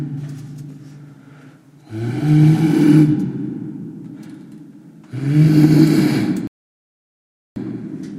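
At 6.47 s the sound cuts to silence. It stays silent until 7.56 s, about 1.09 s later. This is a rebuffering stall. The player used up the audio it had downloaded and had to wait for more data. When enough arrived, playback carried on from the exact point where it stopped. Nothing is skipped or repeated. The gap is dead air, and it stretches the clip by just over a second.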